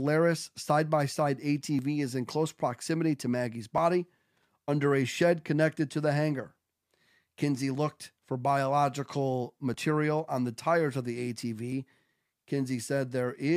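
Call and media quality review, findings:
Overlap between stream segments: segment timestamps overlap, so the player trims the overlap and discards real audio. Waveform jumps, heard as tiny skips at 1.79 s (after "side by side", before "is in close proximity"), 3.78, 7.75 (before "for biological"), 9.74 and 11.72 s. The roughly 2 s spacing fits 2-second segments.

Loose connector crackle: worn or dirty contact in the signal chain making and breaking, chopping the signal and popping any DC present. Irregular burst of crackle/scratching at 4.37–4.45 s, just before "under a shed". Check cables and jacks.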